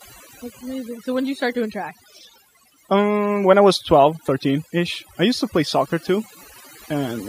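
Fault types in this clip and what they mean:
Overdone noise removal: A noise reduction stage was pushed too hard on a noisy recording. It shuts down frequency bands that sit close to the noise level, and softer parts of the speech vanish with them. Throughout, the background drops and breaks up into twinkling specks.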